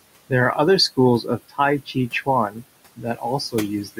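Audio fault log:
Throughout: noise suppressor artifacts. The room noise, sitting about 15 dB under the speech, is pushed down by about 20 dB in the gaps and then lets back in as the speech resumes, so the background pumps with the talking. Unlike a simple gate, which shuts everything at once, this reduction works band by band.
1.49–1.59 s, 2.96–3.22 s, 3.84–3.99 s: speech cut by the noise suppressor. Each time, the suppressor mistakes part of the speech for noise and turns it down with the background, by about 15 dB at 1.49 s, about 16 dB at 2.96 s and about 14 dB at 3.84 s. Each event lasts roughly a tenth of a second or a little more, leaving sounds swallowed and faint. These dips follow the speech itself rather than any fixed timing, which separates them from dropouts or a network gap.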